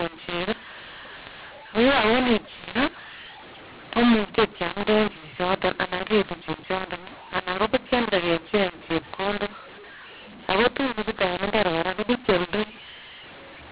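Telephone speech, A-law coded but decoded as mu-law throughout: a mu-law and A-law mix-up. Levels are scrambled, pauses fill with hiss, and the waveform never settles to silence. The spectrogram shows broadband distortion stopping near 4 kHz, as expected from 8 kHz telephone sampling.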